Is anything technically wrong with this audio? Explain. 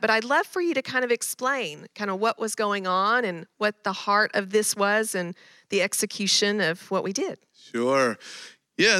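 No, nothing is technically wrong with this audio.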